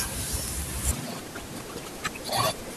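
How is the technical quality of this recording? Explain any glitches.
Quality drops partway through the speech. From 0.91 s to 2.76 s, the audio is read two samples at a time (double speed). Sample pairs become single frames, so speech runs twice as fast and an octave higher.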